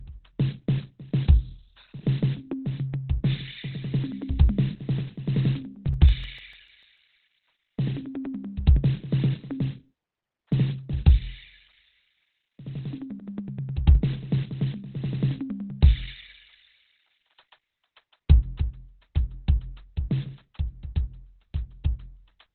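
Music clip. Opus compression runs throughout: nothing is heard above 4.3 kHz, and the sound is muffled and hoarse, which points to a speech-mode, narrowband encode at about 12 kbps. CD scratch ticks appear from 5.94 to 7.12 s and again from 9.64 to 10.53 s, at roughly eight a second. The longest ticks last about 4 ms, and they come where a blemish on each disc turn defeats error correction, so the player conceals or mutes the damaged samples.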